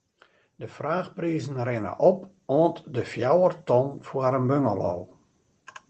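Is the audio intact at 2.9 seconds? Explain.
No. At 2.9 seconds the clip is in the middle of an automatic gain rising fault that runs from 0.05 to 4.87 s. The gain control judged the input too quiet and raised its gain slowly, by about 10 dB over that span, so the speech and the background noise swell together rather than holding a steady level. The call codec's upper limit near 8 kHz stays in place throughout.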